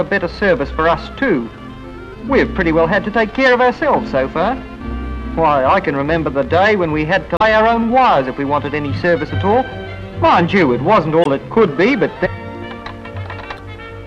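Damaged data in the compressed stream strikes three times, at 7.36 to 7.42 s, 11.21 to 11.27 s and 13.55 to 13.59 s. Each time, corrupted bytes leave the decoder misreading frames and losing sync until it locks onto the next valid frame header. Each fault is a brief chirp or blip of garbled audio, lasting between about 40 and 60 ms, that cuts across the sound before normal decoding resumes.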